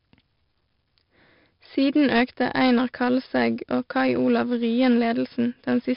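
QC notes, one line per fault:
Throughout, 4-bit ADPCM compression: each speech sample is coded as a coarse 4-bit step from a predicted value, so a gritty hiss rides on every loud syllable and rises and falls with the level, while sharp onsets smear and distort because the adaptive step size lags behind fast jumps. The damage is heavy. Nothing is present above 5.3 kHz, which dulls the sound and fits a low sample rate near 11 kHz at roughly 44 kbps.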